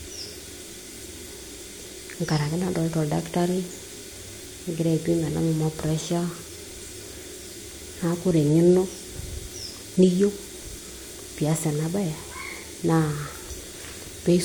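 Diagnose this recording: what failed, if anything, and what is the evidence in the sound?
Nothing failed: the speech holds steady throughout, with no audible defect at any stage of the chain.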